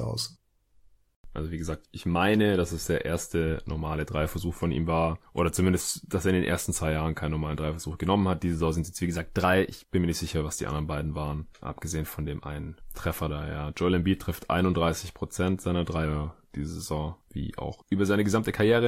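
A drift correction step, likely from clock-matching software abruptly changing playback rate, hits at 9.06–9.78 s, where speech runs 5.5% fast and about 93 cents sharp, then at 16.05–16.68 s, 5.5% slow and about 99 cents flat, each snapping back afterwards.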